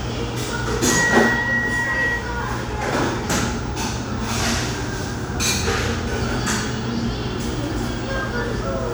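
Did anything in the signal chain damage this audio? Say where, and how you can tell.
No, nothing along the chain seems to have damaged these everyday sounds, and there's no stage I'd point to as having left a mark on them.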